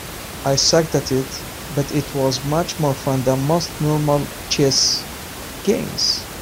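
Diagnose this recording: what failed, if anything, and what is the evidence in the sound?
Nothing in the signal chain has failed: the speech sits over a steady room noise about 13 dB below it, which belongs to the acoustic space around the microphone rather than to any stage of the system.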